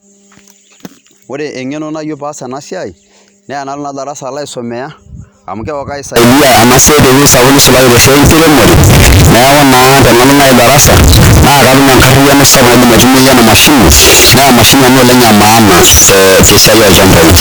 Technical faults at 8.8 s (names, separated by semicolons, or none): signed and unsigned mixed up